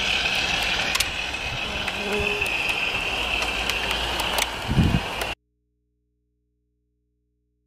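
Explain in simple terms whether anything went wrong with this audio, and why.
At 5.34 s the sound cuts out abruptly and never returns. Until the end only a low mains hum remains, far quieter than the earlier sound. This is an audio dropout to a faint residue, likely a lost signal feeding an input that stayed live.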